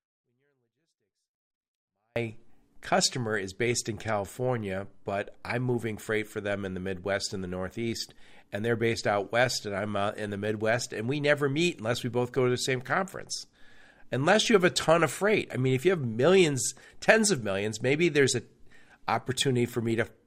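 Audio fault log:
0.00–2.16 s, 24-bit alignment error (too quiet): the speech is clean but about 48 dB down and barely audible. This fits 24-bit samples sitting in the low bytes of a 32-bit word being read as full 32-bit values, which scales every sample down uniformly.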